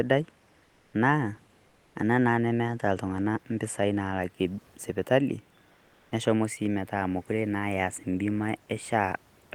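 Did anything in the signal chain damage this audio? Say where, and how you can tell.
Yes, at the codec stage: comfort noise in place of the background at 0.63–0.93 s, 1.67–1.95 s (before "ana naa") and 5.73–6.11 s (after "ltung'ana mpisai naalake sipitali"). The textured room noise turns flat and featureless, about 1–2 dB quieter, likely from Opus discontinuous transmission.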